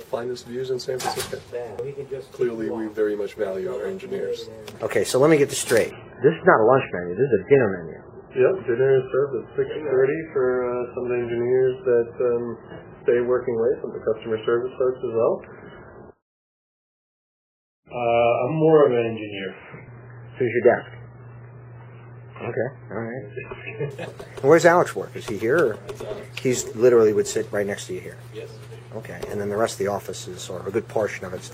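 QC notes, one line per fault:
5.91–23.91 s, adaptive stream at a lower bitrate: the player switched down to a much leaner version of the stream for this 18 s stretch, likely because the connection slowed. The quality change is abrupt with no gap, and nothing is left above 3 kHz, so the top end goes dull while the smeared, warbly codec artefacts come right up. It sounds like a jump from a decent MP3 at around 128 kbit/s to one near 8 kbit/s.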